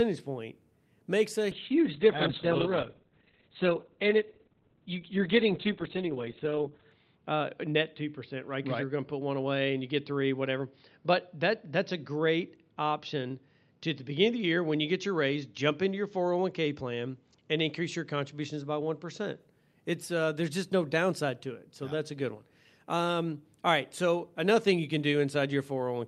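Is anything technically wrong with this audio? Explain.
Yes. From 1.55 to 19.45 s, just after "point makes a", a call bitrate drop cuts encoding from 40 to 7 kbps, shrinking bandwidth from 20 kHz to 4 kHz, so the speech turns muffled and rough, worst for about 5.4 s.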